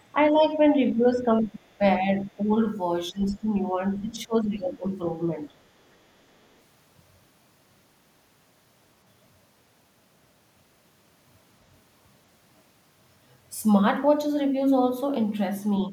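A speech clip, and the talker keeps getting ducked whenever the far end seems to be talking too, which looks like speech suppressed in double talk. The level sags at 0.14–0.63 s, 0.93–1.6 s, 2.2–2.56 s, 3.11–3.54 s and 3.93–4.86 s, and there's a brief dip right at the very end from 15.89 s. The shallow ones are only a few dB down. The worst, around 3.1 s and 4 s, drop by roughly 15 dB. The likely cause is the echo canceller failing to tell the near talker from loudspeaker echo and pulling everything down together. Inside that 3.11 s dip there's also a faint scrap of the other side's voice leaking through, from 3.23 to 3.34 s. It sits roughly 30 dB under the speech, so it's quiet and short. That's most likely residual loudspeaker echo the canceller didn't fully remove from the mic.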